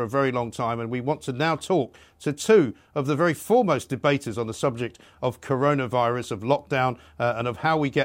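Nothing goes wrong anywhere in this bit of speech, so there's no technical fault to point to at any moment.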